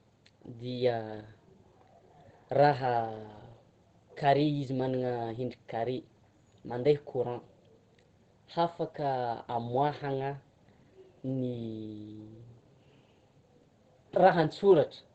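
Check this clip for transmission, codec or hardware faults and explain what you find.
One codec fault runs through the whole speech clip.

Opus compression, throughout, likely from the speech (SILK) mode of the Opus codec at a low rate, which fits something near 16 kbps. At that rate the encoder codes the voice with linear prediction and caps the bandwidth at wideband, so nothing is present above about 8.5 kHz. The damage is plainly audible: the speech sounds muffled and hoarse, with the airy top end gone.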